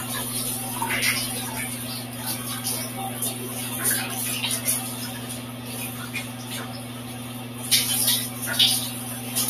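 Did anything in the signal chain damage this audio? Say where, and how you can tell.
Yes. A noise suppressor applied to music or sounds sits in the call-processing stage and runs throughout. It treats sustained tones and ambience as noise, letting onsets through while held parts and tails sink by around 10 dB, so the sound pumps and thins.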